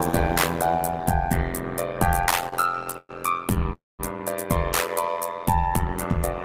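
The whole clip carries overlap-add ripple: the level swings by about 60 dB at a rate of around 100 Hz, producing a metallic buzz with extra tones around each note. This comes from frames being windowed and resummed with an overlap whose gains don't add to a constant, so every frame boundary dips. From 2.13 to 3.67 s there are repeated stalls (stutter). Over that stretch the audio halts 22 times, each gap bridged by continuing the previous sound. The longest gap is 113 ms, and 355 ms in total, about 23% of the span, is filled this way. Nothing is skipped, but the sound drags and catches because packets kept arriving late and the jitter buffer kept draining. At 3.73 to 4.01 s a call audio freeze inserts 262 ms, of which 190 ms decays to silence before playback resumes where it stopped. The likely cause is a delivery hold-up that emptied the buffer and pushed the delay out by the same 262 ms. 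Between 5.03 and 5.67 s a jitter buffer slow-down stretches the audio to 89% speed at unchanged pitch, adding 78 ms. The receiver built up a reserve by repeating single pitch periods, which draws sounds out.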